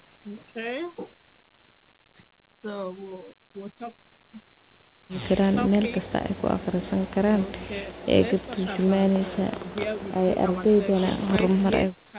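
Nothing goes wrong anywhere in this bit of speech: it has the narrow sound of a phone call, with nothing above 4 kHz, just what you'd expect from a standard G.711-style call codec.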